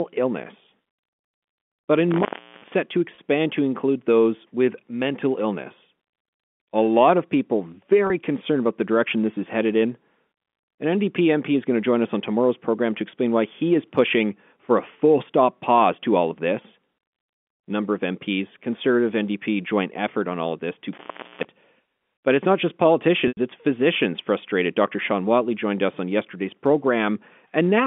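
Intermittent contact from 2.11 to 2.74 s: a loose connection opens for about 0.37 s, so the telephone-band sound (200 Hz to 3.5 kHz) drops out abruptly, with crackle as the contact breaks and remakes and faint hiss in between.

Packet loss with pitch repetition at 3.15 s, and again at 8.07 s between "lot of people" and "concerned about the direction": about 30 ms of audio is missing, which fits a single lost packet. The receiver fills each gap by repeating the last pitch cycle, heard as a brief, slightly held buzz.

Intermittent contact from 20.93 to 21.45 s, just after "all of this to": the line opens for about 0.42 s, again cutting out with crackle at each edge and hiss while it is open.

Packet loss with pitch repetition from 23.28 to 23.37 s, between "but it's not just" and "it's physicians frustrated": a 90 ms gap, which points to three consecutive lost packets. The repeated pitch cycle fades away into silence, and the sound returns with a short cross-fade.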